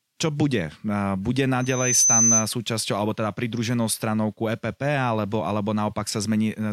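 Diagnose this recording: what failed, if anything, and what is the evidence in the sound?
Loudspeaker feedback squeal in the acoustic loop: from 1.6 to 2.48 s a 6.1 kHz tone swells over about 0.4 s to roughly 5 dB above the speech.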